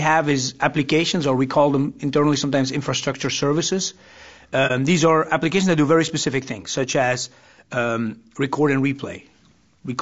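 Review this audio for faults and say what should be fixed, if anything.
Throughout the clip the speech sounds rough and grainy, with a noisy haze filling the gaps between the voice's harmonics and a top band that comes across as thin and synthetic. This is low-delay AAC compression, likely AAC-ELD, whose short analysis frames cannot resolve pitch harmonics finely, so at a starved bitrate the coder smears noise across the spectrum. The damage is plainly audible and points to roughly 32 kbps. Raising the bitrate, or using standard AAC where latency allows, would prevent it.

From 4.67 to 4.71 s the speech briefly dips, fading away and returning smoothly. This is AAC frame loss with muting: a frame of audio never arrived, so the decoder zeroed its spectrum, and the overlapping transform windows blended that silence into the neighbouring frames. The short gap points to a single lost frame of about 30 ms. 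Adding packet-loss concealment or forward error correction on the transmission link would prevent it.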